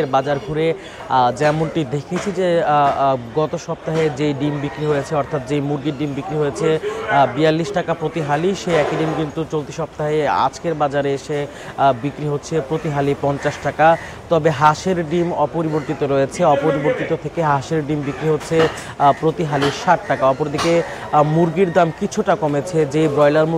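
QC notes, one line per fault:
No faults found on this pass; nothing to log.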